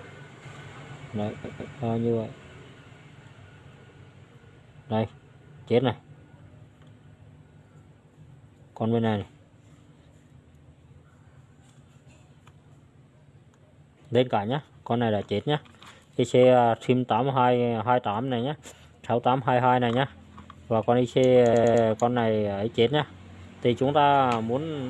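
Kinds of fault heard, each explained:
Repeated frames: A short stutter where the same slice of sound plays again in quick succession. Around 1.44 s a block of about 157 ms is heard three times in a row, and around 21.53 s a block of about 105 ms is heard four times. Each run adds roughly 0.31 s to the clip. The cause is a run of compressed frames being written or sent more than once, so the decoder faithfully replays that stretch.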